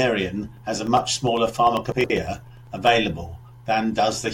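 From 0.57 to 2.87 s there are periodic USB or driver dropouts: about every 0.1 s, roughly a millisecond of audio is replaced by silence, around twenty times. The result is an even, regular tick under the speech. That strict spacing, and ticks only where there is signal, separate it from random glitches.

From 1.92 to 2.10 s there are chunks out of order: a 60 ms chunk plays two chunks late. The speech sounds briefly jumbled, with three hard joins. Unlike a dropout, no audio is missing. It is only in the wrong order.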